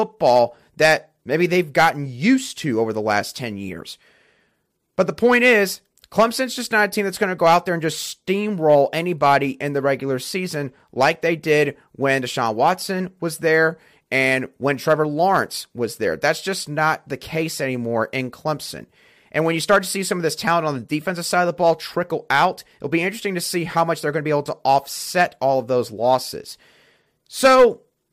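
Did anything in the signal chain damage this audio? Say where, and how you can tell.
Yes. A brittle crackle rides the loudest speech peaks across the whole clip, from start to finish. That is hard clipping: the level was pushed about 8 dB past what the converter or format stage could pass, so a small fraction of peaks were sliced flat, spraying high harmonics.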